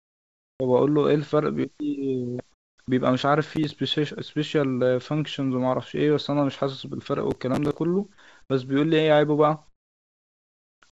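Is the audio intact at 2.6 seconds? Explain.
No. From 2.52 to 2.78 s the real background gives way to a flat, featureless hiss about 16 dB quieter, likely comfort noise synthesized while the sender paused transmission.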